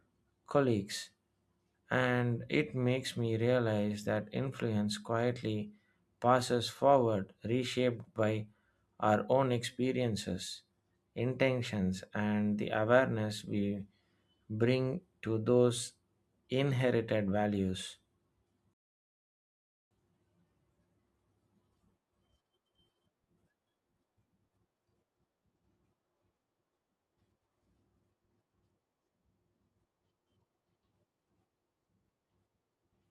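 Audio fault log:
18.74–19.91 s, rebuffering stall: speech halts into 1.17 s of silence, then resumes exactly where it left off, because the player ran out of downloaded audio and waited.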